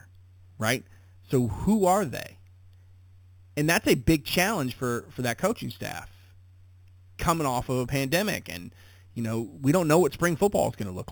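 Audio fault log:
throughout, imaging from sample-and-hold upsampling: bright metallic fizz tracking the speech, about -15 dB, mirrored into 4–8 kHz by held samples, fitting an unfiltered 8 kHz to 44.1 kHz conversion.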